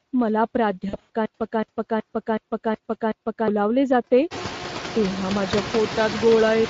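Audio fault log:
throughout, noise suppressor artifacts: residual noise dips by about 12 dB between phrases and swells under speech as bands are gated frame by frame.
throughout, Speex codec: plainly audible coding damage from a CELP coder, which fits a Speex setting near 20 kbps.
0.89 to 1.10 s, VoIP packet loss concealed by the speech codec: about 140 ms lost across 200 ms, longest gap 80 ms; the decoder stretches the last pitch into a fading buzz or coloured noise, distorting speech just after.
1.26 to 3.48 s, stutter with silent gaps: a 230 ms burst replays six times, each followed by 142 ms of dead silence (372 ms cycle), likely a stalled stream re-sending its last fragment.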